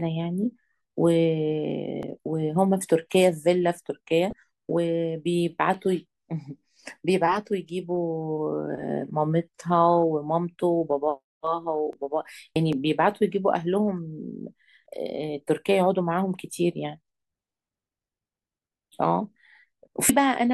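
A sharp single click at 2.03 s is followed by a brief stretch of damaged data in a compressed stream from 4.30 to 4.33 s, and further clicks land at 5.74 and 11.93 s. Each click is likely dropped samples: well under a millisecond of the stream goes missing, so the waveform leaps abruptly without removing any audible sound. The damaged data in a compressed stream recurs from 12.53 to 12.56 s, just before another click at 12.73 s, then from 14.83 to 14.86 s and from 20.07 to 20.10 s. Corrupt bytes make the decoder misread roughly 30 ms of frames and resynchronise.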